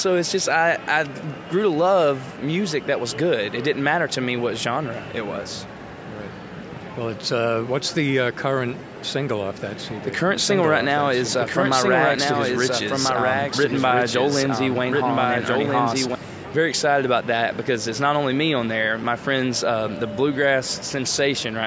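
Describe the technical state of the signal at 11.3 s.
At 11.3 s you're inside a doubled audio track running from 10.35 to 16.15 s. A second copy of the sound sits around one and a half seconds behind the original, about 5 dB quieter, and it's full-band like the rest (both top out at 8 kHz from the call microphone processing). There's no decay or room colour on it. It cuts in and out abruptly at those edges. Likely cause: a slower path captured the audio again, or an edit left two copies out of step.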